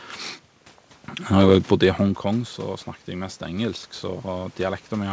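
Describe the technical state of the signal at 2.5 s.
At 2.5 s the speech signal is intact, with no technical fault present; what is heard there is the room's own background noise and the band-limited sound of the G.722 call path, with nothing above about 8 kHz.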